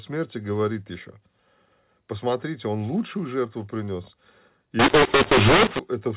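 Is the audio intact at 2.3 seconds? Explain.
Yes, the speech at 2.3 seconds is intact, with no dropout, click or distortion at that moment, only the narrow, band-limited sound of G.711 telephone coding that carries the whole clip.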